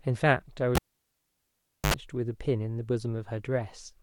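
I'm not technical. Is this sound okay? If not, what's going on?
No. At 0.75 seconds a cable was pulled and plugged in again while live. There is a pop, then near silence for about 1.1 seconds. A short 50 Hz mains buzz, about 74 ms, follows as the plug touches. Another pop comes when the speech returns at 1.94 seconds.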